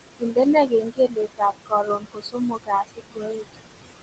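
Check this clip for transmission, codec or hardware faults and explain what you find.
The speech in this clip shows two related faults, both from the noise suppressor in the call's processing chain.

Noise suppressor artifacts run through the whole clip. The suppressor estimates the steady background, here room noise sitting only about 9 dB below the speech, and pulls down each frequency band it judges to be noise, frame by frame, by about 21 dB. The noise drops away in the pauses and swells back up under the speech.

Speech cut by the noise suppressor occurs from 0.19 to 0.37 s, from 0.68 to 1.41 s and from 1.66 to 3.68 s. The suppressor mistook parts of the speech for background and attenuated them along with the noise. The deepest drops are about 20, 21 and 22 dB. The affected portions add up to roughly a tenth of a second, a third of a second and about a second. Soft consonants and word endings there sound swallowed or faint, while the Opus call path keeps the audio band-limited to 8 kHz.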